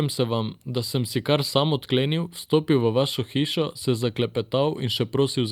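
No technical faults can be heard anywhere in this speech.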